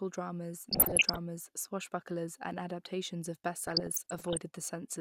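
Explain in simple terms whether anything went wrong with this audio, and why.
Two patches of this speech have DAB burbling, from about 0.66 to 1.18 s and again from 3.67 to 4.42 s. You hear short blips of noise on top of the voice. It's what weak digital radio reception does: some data errors slip past the error correction, so individual slices of the frequency range jump up or down in level for a moment, frame after frame. The second patch runs a bit longer.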